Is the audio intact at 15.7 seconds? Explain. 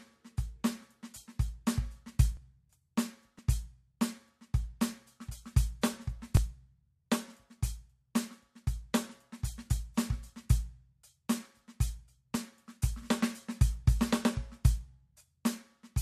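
Yes, the music plays through 15.7 seconds intact, with no dropout, click, distortion or other fault at that moment.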